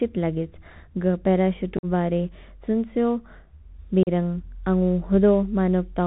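From start to finish the speech has gone through the Bluetooth CVSD headset codec. This narrowband link sends one bit per sample at 64 kbps, each bit only saying whether the waveform should step up or down, with an adaptive step size. The damage is plainly audible. Nothing above 4 kHz survives, so the speech sounds boxed in. Loud high-frequency sounds outrun the step and distort, s sounds come out scratchy, and a granular hiss sits beneath the speech.

At 1.77 to 1.85 s, unconcealed Bluetooth headset packet loss drops voice packets between headset and phone, about seven of them. Together they remove 52.5 ms of audio spread across 60 ms, with the longest gap lasting 45 ms. The missing stretches are replaced with silence or an idle pattern rather than being smoothed over, so the speech breaks into abrupt-edged holes and returns quieter for a moment, as a CVSD link does after a loss. A second loss at 4.03 to 4.09 s removes 37.5 ms, about five packets, leaving another brief, sharp-edged hole followed by the same short dip in level.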